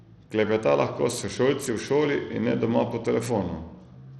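Throughout the speech, treble flickers and drops out under gritty noise, likely Bluetooth SBC compression at a low bitrate near 80 kbps; a spectrogram shows patchy, blocky high bands.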